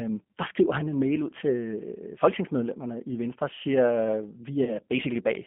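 The whole clip carries the sound of the G.729 codec. Content sits in a 200 to 3400 Hz telephone band, with nothing above. Speech is rebuilt from a filter, a pitch predictor and sparse pulses. It sounds plainly rough and synthetic, which fits an 8 kbit/s stream.

From 4.63 s to 4.77 s comes VoIP packet loss concealed by the speech codec. About 40 ms of audio went missing, which points to two lost packets. The decoder stretched its last pitch and filter across the gap, lowering the gain as it went. The voice stays weak or distorted briefly afterwards.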